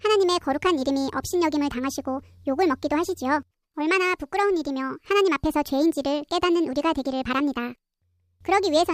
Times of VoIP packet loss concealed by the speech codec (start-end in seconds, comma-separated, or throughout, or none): none